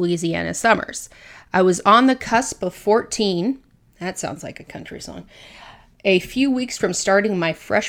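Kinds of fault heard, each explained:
No faults can be heard in this recording.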